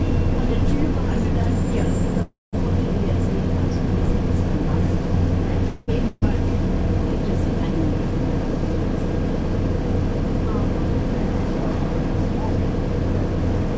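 From 2.22 to 2.55 s the sound stretches into a fading buzz or hiss that drops to about 180 ms of silence before carrying on, and from 5.69 to 5.90 s it holds as a decaying buzz or hiss without going silent. These are call audio freezes, likely from packets stalling until the jitter buffer ran dry, so about 0.3 s and 0.2 s of gap were inserted while nothing was lost.

From 6.08 to 6.24 s the last sound is briefly held and fades out, and the sound picks up further along, skipping roughly a quarter of a second. This is a burst of packet loss: consecutive packets never arrived in time, so the receiver extended the last sound and then jumped ahead. The band tops out at 8 kHz, which fits a G.722 call path.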